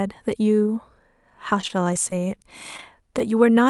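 From 1.61 to 2.37 s the speech turns choppy and robotic: repeated packet loss, with about eight short holes, none longer than about 19 ms, each patched by stretching the preceding sound. On a spectrogram, harmonics smear into repeated flat segments; the waveform shows looped, too-regular cycles.

Short concealed packet loss then follows at 2.77 to 2.79 s, at 2.81 s and at 3.19 to 3.21 s. Roughly 10 ms of audio goes missing each time and is filled by continuation, giving a brief smear or wobble. Each appears as a thin vertical seam in the spectrogram, where the Opus call path's content stops near 12 kHz.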